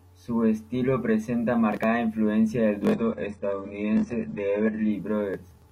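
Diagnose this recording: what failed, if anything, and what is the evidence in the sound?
Network-triggered adaptive stream at a lower bitrate: from 2.92 to 4.92 s codec artefacts rise suddenly without a gap, and the spectrogram goes blank above 10.9 kHz, which fits a low-bitrate HE-AAC version.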